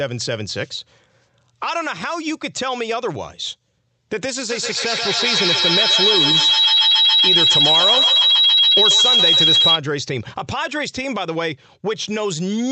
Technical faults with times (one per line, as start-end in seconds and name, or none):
4.49-9.85 feedback howl